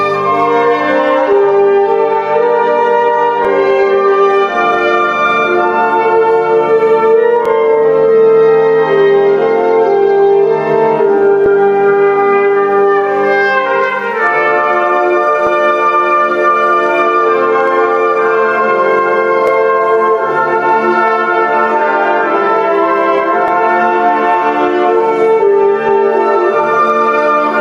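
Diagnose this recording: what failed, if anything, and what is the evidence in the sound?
Overlapping chunks, at the driver or buffer stage. A brief stutter or click lands at 3.45, 7.46, 11.46, 15.47, 19.47 and 23.48 s, exactly every 4 s. At each join about 6.5 ms of audio plays twice because each block begins before the previous one has finished. The metronomic 4 s spacing and the doubled sliver set it apart from random dropouts or packet loss, which leave gaps rather than repeats.

Gain pumping, from the capture and dynamics processing. Throughout the clip the level swings by around 5 dB under each loud sound, so loud and soft passages sit squashed together. The likely cause is input gain set far too high, with a fast limiter or compressor clamping down on every peak. A slow automatic gain control drifts over seconds, and a noise gate cuts the background out entirely. This instead tracks each loud sound closely.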